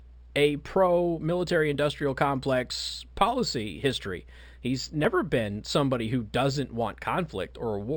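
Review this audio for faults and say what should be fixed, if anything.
Imaging from linear upsampling is present throughout the speech. The top of the band is dulled, and a faint mirror copy of the spectrum sits between 6 kHz and 12 kHz, roughly 25 dB below the signal, heard as a light metallic shimmer on sibilants. The pattern fits a 12 kHz source raised to 48 kHz by straight-line interpolation, which filters too weakly to remove the images. To prevent it, resample with a proper windowed-sinc or polyphase anti-imaging filter.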